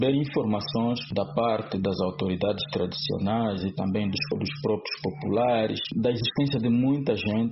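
Nothing in the audio stood out as a technical fault on listening.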